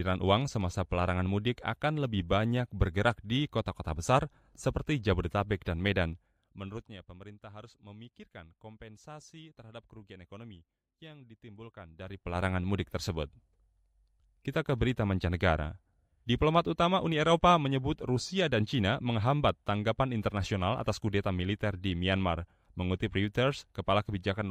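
From 6.04 to 7.06 s, just before "pemerintah harus memikirkan kompensasi", the level falls by about 20 dB in 2 dB jumps, roughly ten a second. That is zipper noise: unsmoothed gain steps tick audibly, unlike a clean fade. At 11.89 to 12.45 s, before "mudik tersebut", a similar rise of about 20 dB in 3 dB steps zips again.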